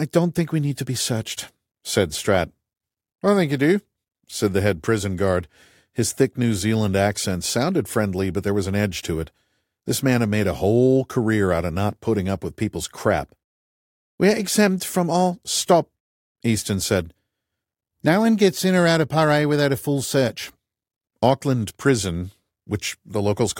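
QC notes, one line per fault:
No technical faults were found in the signal at any point in the recording.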